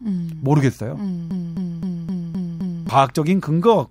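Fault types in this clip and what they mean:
Broken-record loop: from about 1.31 s to 2.89 s the speech stops moving forward and a 0.26 s fragment plays six times back to back, most likely because the player or stream stalled and kept resending its last chunk, so whatever came next is gone.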